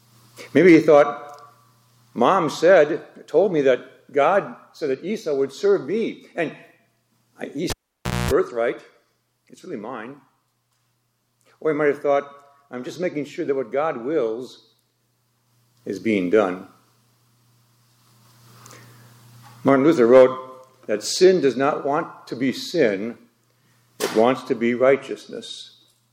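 A cable pulled and plugged in interrupts the audio from 7.70 to 8.31 s. A pop at 7.70 s marks the live cable leaving its socket, and the signal drops to near silence for about 560 ms. As the plug goes back in, only the tip makes contact at first, picking up a 60 Hz mains buzz lasting about 230 ms. A second pop at 8.31 s follows as the connection seats fully and the sound returns.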